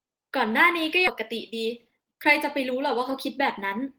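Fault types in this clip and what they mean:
Skip ahead: at about 1.07 s playback jumps straight forward with no filler, so something like 0.7 s of speech just vanishes and the two sides butt together almost seamlessly, which is why it sounds like a clipped-out chunk rather than a pause.
Jitter buffer speed-up: from about 1.21 s to 3.86 s the receiver keeps trimming tiny pitch-period slices to drain an overfull buffer, so the speech runs roughly 15% fast at normal pitch, shaving off around 0.4 s and sounding rushed.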